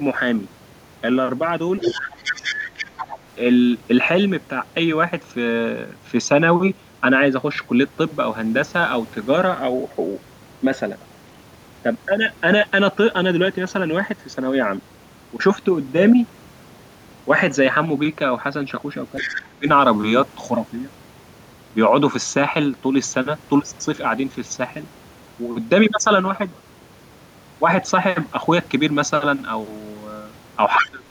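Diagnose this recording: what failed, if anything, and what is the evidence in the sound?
Other side's voice leaking through at 1.81–2.01, 2.21–2.55, 2.78–3.18, 19.16–19.39 and 30.79–30.9 s: short scraps of a second voice sit about 5 to 10 dB under the talker. This is a call-processing failure, likely residual loudspeaker echo that the echo canceller left in the microphone signal.

Speech suppressed in double talk at 1.98–2.96, 19.22–19.67 and 30.77–31.03 s: the talker's level dips by roughly 20 dB while that second voice is present. The stage is call processing, likely an echo canceller that could not separate near speech from echo during overlap and attenuated both.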